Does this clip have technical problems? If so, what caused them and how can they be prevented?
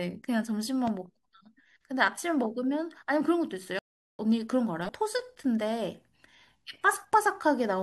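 Yes. There are three kinds of fault.

The loud pop at 0.87 to 0.90 s is a single sharp pop standing roughly 10 dB above the speech, which carries on underneath it. It was likely caused by a voltage pulse from a plug, switch, static discharge or driver glitch entering the signal chain. On a waveform it is a tall, narrow spike. On a spectrogram it is a thin vertical line covering the whole frequency range. Firm connections, grounded equipment and switching gear only while muted prevent it.

Damaged data in a compressed stream shows up twice: as a brief glitch at 2.07 to 2.09 s and again at 4.88 s. Corrupted bytes make the decoder misread frames and lose sync. It then skips forward to the next valid frame header. A spectrogram shows short smeared or blocky patches that break the harmonic pattern, and the waveform shows a small discontinuity. Error-checked transfer and storage, with checksums on the compressed files, prevent it.

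The playback stall at 3.79 to 4.19 s is a 400 ms silence in mid-flow, after which the speech resumes. The likely cause is that the player ran out of buffered data or its audio thread was blocked. It appears as a flat line on the waveform and an empty vertical band on the spectrogram. A larger playback buffer and a high-priority audio thread prevent it.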